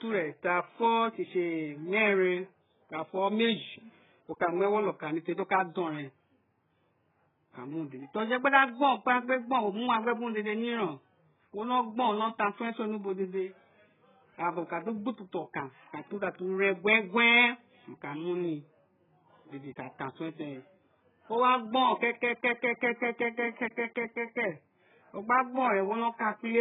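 Throughout the speech, heavy compression has stripped the signal, most likely AAC compression at a very low bitrate, around 8 kbps. Nothing survives above 3.8 kHz, so the audio sounds dull and muffled, with smeared, warbling textures and gappy, fizzy sibilants.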